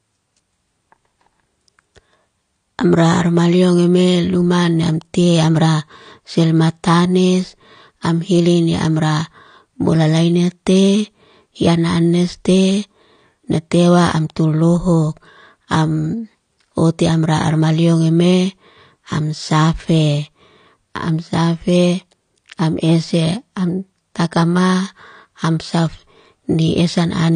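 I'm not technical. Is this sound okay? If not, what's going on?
No. The speech sounds dull and smeared all the way through, with no sound above 9.8 kHz. Likely cause: AAC compression squeezing the file too hard.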